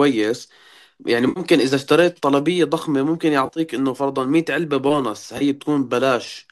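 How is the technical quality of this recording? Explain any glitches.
The recording has three short dropouts, heard as AAC frame loss with concealment. Around 1.29–1.40 s, about 70 ms of data went missing. From 3.46 to 3.60 s, roughly 80 ms was lost in scattered bursts, the longest about 30 ms. At 5.38–5.43 s, about 30 ms was lost. Each time the decoder patched the gap by reusing and reshaping the last good spectrum, so the speech briefly turns smeared, noisy and phasey rather than falling silent. The underlying coding is light low-delay AAC, likely AAC-ELD.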